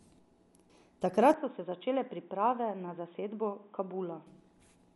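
From the start the speech is dull and band-limited, with nothing above about 11.4 kHz, and a rough, fluttering noise clings to tonal parts. This is likely Dolby Digital compression at a low bitrate, which fits roughly 64 kbps: the encoder cuts the top of the band and leaves many frequency lines without mantissa bits, so the decoder fills them with dither noise. The damage is plainly audible across the whole clip.

At 1.34 s the sound abruptly turns boxy and narrow, with nothing above about 3.8 kHz. It also drops a few decibels in level and gains a faint new noise floor, roughly 45 dB below the speech. There is no silence at the changeover. This points to the input switched to a poorer device, likely another microphone or a headset call profile with a narrower band and its own tone and background. At 4.27 s the wider band returns just as suddenly.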